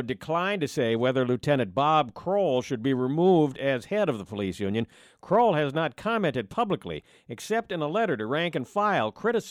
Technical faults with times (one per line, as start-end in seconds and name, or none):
none